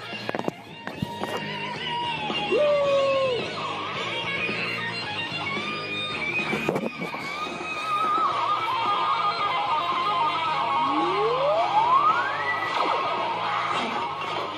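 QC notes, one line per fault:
No faults found in this recording.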